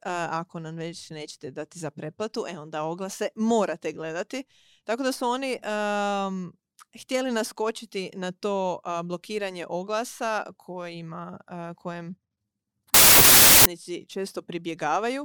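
This speech clip... no, must not start that way.

From 12.94 s to 13.66 s the speech collapses into loud, harsh noise. The original sound is still faintly there, buried. It also runs slow, at about two-thirds speed, and the pitch drops to match. This is a wrong sample width fault. The samples were stored as packed 24-bit integers but read back as 16-bit ones. Most values end up built from mismatched bytes. Only some keep the real signal's top bits.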